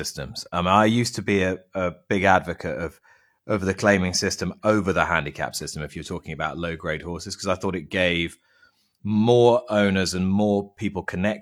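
No technical faults can be heard anywhere in this speech recording. There is nothing to place on a timeline, because no event at any point interrupts or alters the signal.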